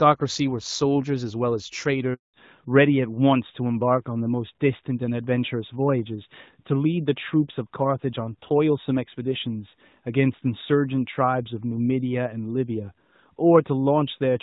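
At 2.14 s the speech dies away within a few tens of milliseconds and stays silent until 2.34 s, a 200 ms hole. This is a handover gap: while the call switched networks no speech frames arrived, so whatever was said then is gone.

From 2.34 s to the end the speech sounds duller and rougher, with nothing left above 4 kHz. The crisp HD Voice quality before the gap, which fits AMR-WB at 12.65 kbit/s, is lost in this fallback to narrowband, likely to AMR-NB at 12.2 kbit/s.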